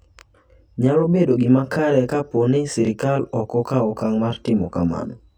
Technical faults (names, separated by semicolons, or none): channel delay (comb filtering)